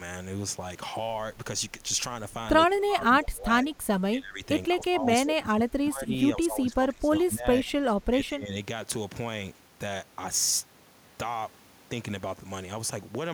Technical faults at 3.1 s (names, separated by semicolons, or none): speech suppressed in double talk